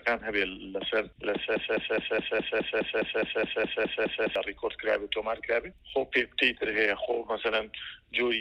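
From 1.56 s to 4.36 s the audio falls into a broken-record loop: a fragment of about 208 ms plays back to back 13 times, each repeat identical, giving a rigid stutter at roughly five cycles per second. The likely cause is a stalled player, encoder or stream that kept re-sending the last chunk it held. Whatever should have played during those 2.8 seconds is missing, and the sound resumes only after the loop ends.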